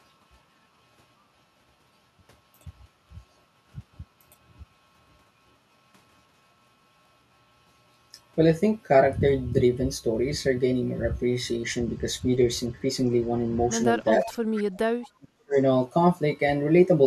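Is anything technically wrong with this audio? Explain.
Yes, there are two related problems near the end of the clip, both in the last three seconds.

Speech suppressed in double talk appears from 14.18 to 14.28 s and again from 15.13 to 15.57 s. In the first, the voice sags by roughly 10 dB for about a tenth of a second. In the second, it falls away almost completely for around 0.4 s, a drop of some 40 dB. The likely cause is an echo canceller that heard both ends talking at once, could not tell the local talker from loudspeaker echo, and attenuated everything.

Echo leak shows up from 14.25 to 14.38 s and from 14.57 to 14.63 s. Faint delayed copies of the voice trail the original by 446 ms. The first sits about 15 dB below the speech and the second about 20 dB below, so both are short, quiet scraps rather than a sustained echo. These are likely residue from a far-end loudspeaker whose echo canceller let part of its microphone pickup return down the line.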